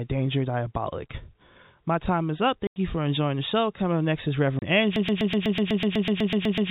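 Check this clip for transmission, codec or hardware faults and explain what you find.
Yes, two faults are present: packet loss filled with silence in two places, and a broken-record loop that runs to the end, all heard through an A-law telephone channel whose band stops at 4 kHz.

Packet loss filled with silence occurs at 2.67 to 2.76 s (90 ms) and 4.59 to 4.62 s (30 ms). Missing packets were replaced by digital silence, which fits 30 ms packets. Each gap has hard edges. The waveform shows flat near-silent stretches, and the spectrogram shows blank vertical bands with sharp borders.

A broken-record loop begins at 4.96 s and lasts to the end. A 124 ms fragment repeats back to back about fourteen times, and the audio that should follow is lost. The likely cause is a stalled stream that kept resending its last buffer. The waveform and spectrogram show an identical block tiled repeatedly.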